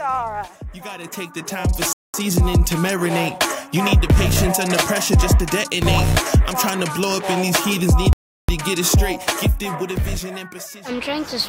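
A rebuffering stall breaks the sound twice, at 1.93 s for about 0.21 s and at 8.13 s for about 0.36 s. Each time the player has exhausted its downloaded audio, drops to silence while waiting, then resumes exactly where it halted, adding time but losing nothing.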